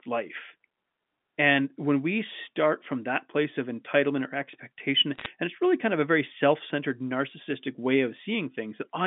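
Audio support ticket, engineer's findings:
Bit errors on the digital phone line, 5.15–5.26 s, after "of entitlement or expectation": single-sample ticks crackling over intact speech, with no gaps or muting as packet loss would leave. Under 1% of bits flipped.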